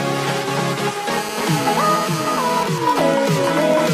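From 1.12 to 2.63 s a hard, raspy 217 Hz buzz sits about 10 dB below the audio: GSM phone buzz, a nearby 2G phone's call bursts rectified by the circuitry. From 2.66 to 3.86 s it turns into even ticks with a longer buzz twice a second at a similar level. These are GSM signalling bursts, sent while the phone's user is silent in the call.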